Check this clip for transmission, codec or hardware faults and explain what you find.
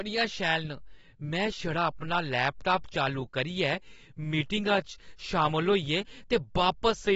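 One codec fault runs through the whole speech clip.

AAC compression, throughout: the cause is likely AAC-LC encoding at a low bitrate, consistent with about 27 kbps. The encoder starves upper frequency bands and removes everything above 7.7 kHz, leaving the sound dull and smeared, with plainly audible fizz around sibilants.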